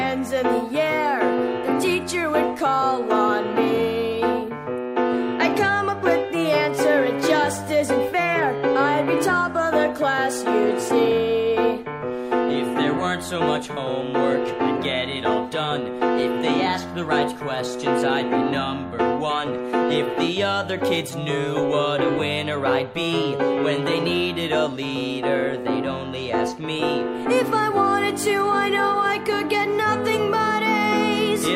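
No technical faults can be heard anywhere in the audio.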